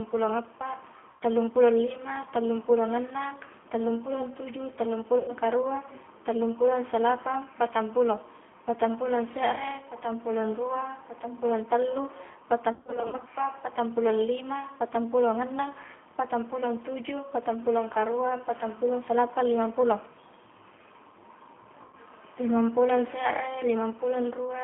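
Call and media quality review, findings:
G.729 codec, whole call: narrowband, rough, slightly synthetic speech. Spectrogram shows energy confined to about 250 Hz to 3.4 kHz, empty above. Sound fits an 8 kbit/s G.729A path that rebuilds speech from filter, pitch and sparse pulses.

VoIP packet loss concealed by the speech codec at 1.11–1.22 s, 5.19–5.34 s and 21.82–21.96 s: gaps of about 90–110 ms replaced by a stretched buzzy tone or coloured noise that fades. Waveform shows a decaying envelope. The decoder extrapolates its last pitch and filter.

Same fault at 12.72–13.23 s: about 260 ms lost, scattered over roughly half a second, longest single gap 50 ms. Spectrogram shows repeated smeared patches. Speech stays weak or distorted between them while the predictor state recovers.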